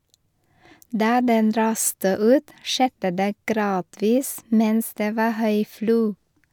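No technical faults can be heard anywhere in the speech. With no fault events in the recording, there are no times or values to give.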